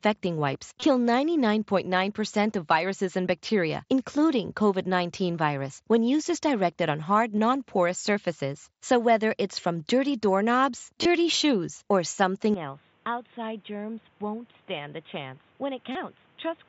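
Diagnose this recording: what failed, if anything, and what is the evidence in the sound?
Wireless link: concealed Bluetooth headset packet loss at 0.80–0.82, 7.37, 11.03–11.05 and 15.92–15.95 s. Each gap is a brief buzzy repeat, visible as copied waveform cycles.

Input stage, likely an input switched to a poorer device at 12.54 s. The spectrogram cuts off at 3.8 kHz, the level drops about 10 dB, and new noise appears, with no gap.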